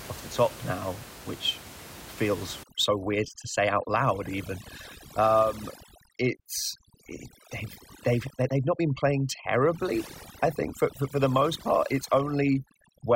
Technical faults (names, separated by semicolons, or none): overdone noise removal